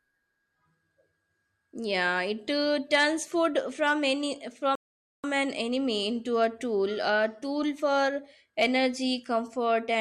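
At about 4.75 s, right after "turns food from any", the speech just drops into silence and sits there until about 5.24 s, then picks up with "an enemy into a" as if nothing happened. That's a rebuffering stall: the player used up its downloaded audio and had to wait for more to arrive. Nothing gets skipped, since it resumes exactly where it stopped, but roughly 0.48 s of dead air gets wedged into the sentence.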